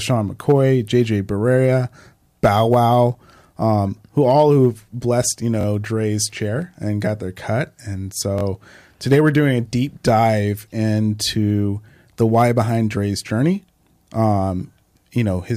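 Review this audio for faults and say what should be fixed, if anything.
A repeated buffer causes two short stutters in the speech. The first runs from 5.61 to 5.65 s, just after "all who've blessed you". The second runs from 8.38 to 8.43 s, just before "today we're doing a". In each, one 21 ms piece plays twice more with hard joins, which fits a 1024-sample buffer. Little or no audio is lost. Fresh samples arrived late, so the device replayed old data. Larger buffering or a higher-priority audio thread would prevent these underruns.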